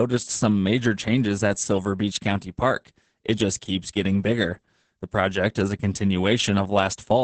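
Muffled, hoarse, slightly robotic speech throughout, with nothing above about 8.7 kHz: heavy Opus voice compression, its SILK coder coarsely coding the excitation at what fits roughly 10 kbps.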